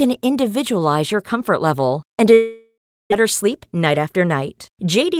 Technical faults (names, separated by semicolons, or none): long network dropout; jitter buffer speed-up